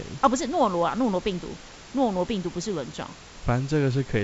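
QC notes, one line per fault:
No faults heard anywhere in this speech.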